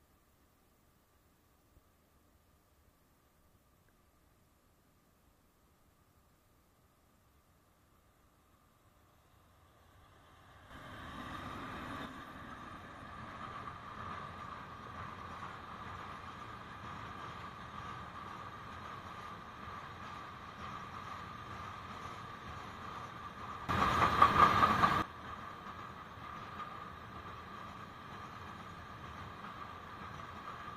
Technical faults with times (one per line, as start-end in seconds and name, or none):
10.70-12.06 sudden gain jump
23.69-25.02 sudden gain jump